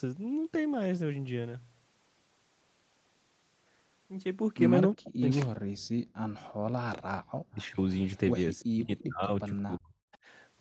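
Speech over a call link is hit by three echo-canceller faults. Speech suppressed in double talk, likely from the canceller mistaking the talker for loudspeaker echo, pulls the voice down by as much as 40 dB from 4.95 to 5.83 s, 7.37 to 7.8 s and 8.63 to 9.94 s. Unlike a network dropout, the cuts follow the overlap. Background gated by the echo canceller drops the room sound by about 40 dB between 6.11 and 6.65 s, for roughly a fifth of a second. Because the noise floor vanishes while no voice is cut, it differs from double-talk suppression. An echo leak, likely from incomplete echo cancellation, returns a faint copy of the voice about 0.35 s late, around 25 dB down, from 7.6 to 9.04 s, with a fainter scrap at 10.13 to 10.17 s. Its fixed delay separates it from reverberation, which decays smoothly instead of repeating.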